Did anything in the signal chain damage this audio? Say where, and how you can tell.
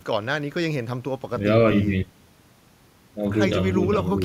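No, nothing in the chain audibly damages this speech recording, and the signal stays continuous and intact throughout.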